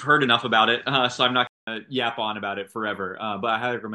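A speech clip that opens band-limited and duller, with nothing above 8.5 kHz, a new noise floor roughly 30 dB under the signal, and a level shift of around 5 dB until 1.67 s, where a 200 ms silence precedes fuller sound: likely an input switched to a poorer device.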